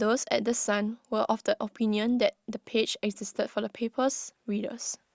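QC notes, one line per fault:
Nothing stood out on listening to the speech in this clip.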